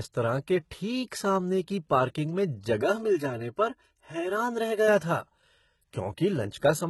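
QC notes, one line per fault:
Throughout: HE-AAC compression. Nothing remains above 11.8 kHz, and the treble is heavily damaged. It is likely rebuilt by band replication, so upper harmonics do not match the lower ones. S sounds turn gritty and metallic. This fits a very low bitrate near 16 kbps.
2.82 to 4.88 s: channel delay (comb filtering). One channel lags the other by about 3 ms, and the two are summed to mono. Shared content cancels at evenly spaced frequencies, starting near 150 Hz. The sound turns hollow and phasey, then recovers.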